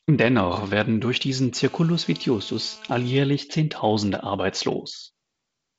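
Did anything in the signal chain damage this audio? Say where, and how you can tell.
Yes. A GSM phone buzz entered the analogue wiring: the audio circuit rectified the 217 Hz radio bursts of a nearby 2G handset on a call. From 1.56 to 3.17 s, just after "werden durch diesen", a steady, raspy, harmonic-rich buzz sits about 23 dB below the speech.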